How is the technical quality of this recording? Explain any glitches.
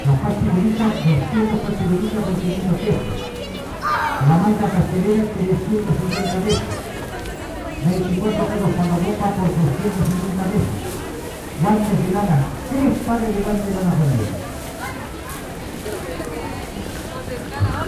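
No glitches can be heard anywhere in this recording of sounds. There is nothing in it that needs explaining.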